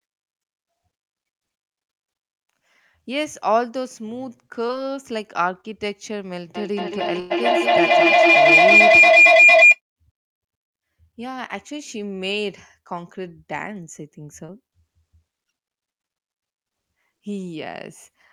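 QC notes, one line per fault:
4.67–4.71 s, 5.61–5.66 s and 14.46–14.50 s, short concealed packet loss: each time about 20 ms of audio failed to arrive, and the receiver bridged it by extending the preceding sound for 13, 31 and 21 ms before blending back. The result is a brief smear or wobble, too short to become a held tone.
7.20–7.32 s, burst of packet loss: about 100 ms went missing in one stretch, and the receiver stretched the last sound for 102 ms, fading it rather than dropping to silence. It is heard as a held buzz or sinking hiss, then a jump forward, so unlike the short smears, a real chunk of the speech is gone.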